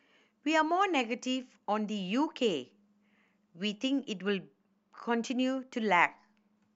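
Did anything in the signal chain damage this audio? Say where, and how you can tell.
Yes. Channel delay (comb filtering), 4.27 to 6.57 s, at the mono downmix. A roughly two-sample lag cancels highs near 10 kHz. The speech turns dull.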